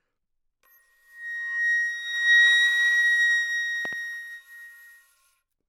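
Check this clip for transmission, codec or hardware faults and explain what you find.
There is one hardware-type fault, a loud pop. At 3.85 to 3.95 s, two sharp pops land in quick succession, peaking a few dB above the sound, which carries on underneath. The likely cause is a voltage step from a plug, switch, static or driver glitch, shaped by downstream circuits. The waveform shows two tall spikes, and the spectrogram shows two thin full-height vertical lines.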